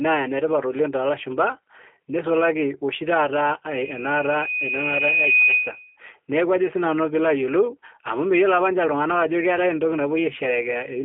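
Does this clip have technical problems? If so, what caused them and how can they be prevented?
Yes. G.729 codec damage runs throughout the speech. It sounds rough and slightly synthetic, which fits an 8 kbit/s G.729A stream. Each 10 ms frame is rebuilt from a vocal tract model and a few pulses. Nothing above 3.5 kHz survives. Prevention means sending speech through a wideband codec instead.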